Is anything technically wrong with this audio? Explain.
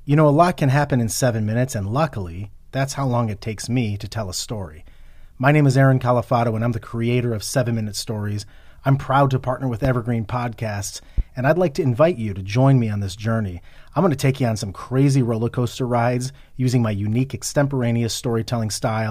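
Yes. Two loud pops, at 9.85–9.89 s and 11.18–11.22 s, jump roughly 10 dB above the speech, likely from brief voltage spikes such as static or a switch, while speech continues underneath.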